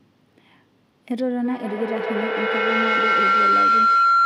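Feedback howl from 1.44 s to the end: the microphone re-captures a loudspeaker, each pass gaining level, building to a tone near 1.5 kHz, with the loop repeating every 150 ms or so, about 8 dB above the speech.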